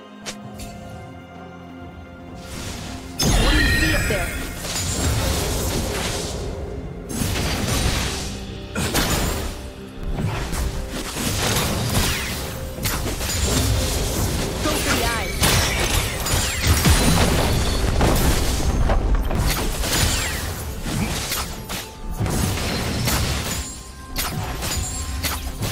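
From 0.23 s right through to 25.24 s there's a steady tick every 0.49 s, classic periodic USB or driver dropouts. Something keeps stalling the bus or driver, and around 10 ms of audio is skipped outright each time, roughly fifty clicks in all.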